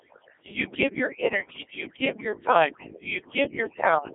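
Throughout this speech clip the background collapses to near silence dotted with twinkling specks: overdone noise removal that pulled whole frequency bands down along with quiet parts of speech. The voice is also robotic and buzzy, confined to about 300 Hz to 3.5 kHz with nothing above 3.8 kHz. That is heavy Codec 2 vocoder damage, consistent with roughly 1.6 kbit/s, where speech is rebuilt from sine waves rather than the original waveform.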